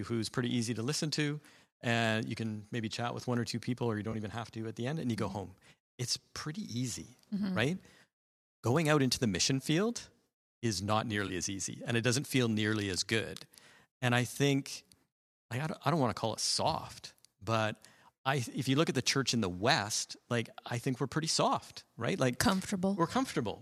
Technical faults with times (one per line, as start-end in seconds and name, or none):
4.12-4.15 AAC frame loss with concealment
11.28-11.30 AAC frame loss with concealment